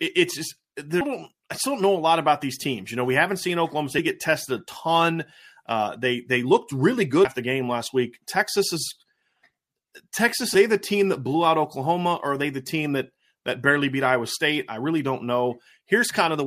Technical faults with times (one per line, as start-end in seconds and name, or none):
1.01 compressed frames skipped
7.25 compressed frames skipped